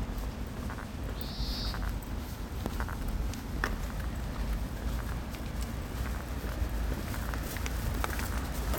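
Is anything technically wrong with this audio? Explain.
Yes. An overlap between stream segments occurs at 5.51 s. Two segments claimed the same stretch of time, so the player discarded about 13 ms of sound that was never actually duplicated. The waveform jumps across the gap, producing a brief click or tiny skip.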